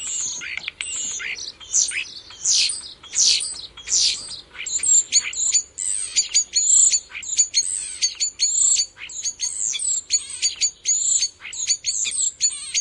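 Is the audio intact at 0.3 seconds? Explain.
Yes, the audio at 0.3 seconds is intact, with no dropout, click or distortion at that moment.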